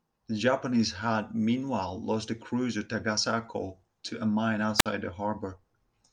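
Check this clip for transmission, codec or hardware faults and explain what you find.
One fault: a wireless microphone squelch dropout from 4.77 to 4.86 s in this speech clip, right after "to a mine". The analogue FM link's signal fades, hiss rises briefly as the carrier weakens, and then the receiver's squelch cuts the output entirely, leaving a hole of near silence about 54 ms long. Once the signal recovers, the squelch reopens and the speech resumes.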